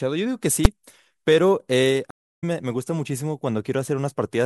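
Invalid numbers at full scale at 0.65 s: a calculation produced infinite or invalid values, pinning the output to an extreme for about 5.8 ms (fitting a 256-sample block), heard as one bang.

Stream reconnect from 2.11 to 2.44 s: the connection dropped, leaving 317 ms of silence. A fresh decoder restarted mid-stream, so the speech resumes roughly a third of a second later, fading in.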